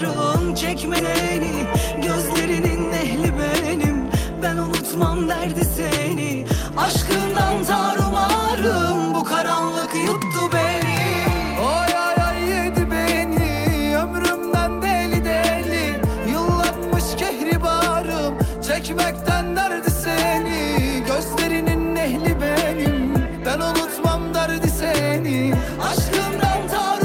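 Around 0.99 s there's a skip ahead: roughly a second of audio got dropped, so playback jumps forward with no gap, the two sides butted together. Then come three jitter buffer speed-ups, at 2.50 to 9.58 s (1%), 16.58 to 19.83 s (2%) and 21.76 to 25.70 s (1%). The buffer was running deep, so tiny pitch-period chunks were trimmed, about 70, 70 and 50 ms in all, making things run marginally faster at unchanged pitch.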